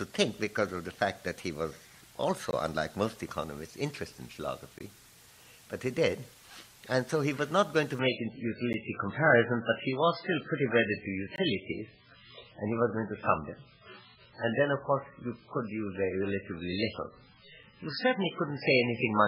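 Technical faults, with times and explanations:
2.51–2.53, 4.79–4.81, 8.73, 11.36–11.38 and 17.63 s, block of digital silence: the audio drops straight to silence and snaps back with no fade, so each one lands as a tick or a tiny pop. The gaps are short: 20 ms at the 2.51, 4.79 and 11.36 s ones, 10 ms at 8.73 s and just 5 ms at 17.63 s. That pattern points to the output buffer not being filled in time.
7.99 s to the end, adaptive stream at a lower bitrate: at 7.99 s the quality falls off a cliff with no gap. There's nothing above 5.3 kHz from here on, so the top end is gone and what's left sounds dull, with more codec artefacts. That fits the stream switching down from a normal MP3 rate to something around 8 kbit/s because the connection slowed.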